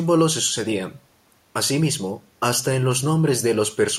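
Listening through the speech, nothing stood out as a problem, with only a faint room noise sitting about 43 dB below the voice.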